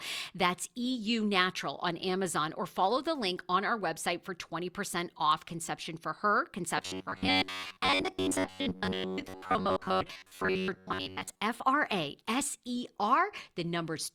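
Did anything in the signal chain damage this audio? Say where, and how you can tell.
Yes. Robotic sound from repeated short buffers runs from 6.78 to 11.44 s, starting just after "off conception for her". Across that span the audio becomes a rigid, metallic buzz at about 94 Hz that only loosely follows the original, and roughly 70 percent of the time is filled by repeats rather than new audio. The stage is likely the driver or buffer: when audio arrives too seldom, a segment of about 10.7 ms is replayed instead, which sets that fixed buzz rate.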